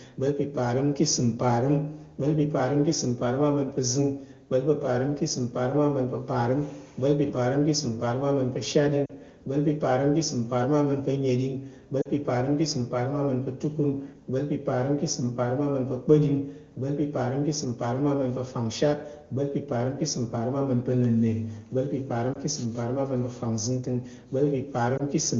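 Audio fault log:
9.05–9.11 s, 12.02–12.09 s, 22.33–22.38 s, 24.97–25.02 s: lost AMR speech frames. Corrupted frames failed their checks, so the AMR-WB decoder reused its last good settings at falling gain. Each drop sounds like a brief dip or warble lasting one or two 20 ms frames.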